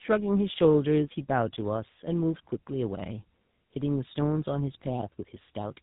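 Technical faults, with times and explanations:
Throughout: tandem speech coding. The speech passed through two low-rate speech coders in a row, with a plain telephone-grade link between them. The sound points to AMR-NB at 12.2 kbit/s and then GSM full rate at 13 kbit/s. Each coder models the output of the one before, so their errors pile up. That is why it sounds rough, muffled and warbly. Nothing is left above 3.8 kHz, which fits narrowband telephone channels.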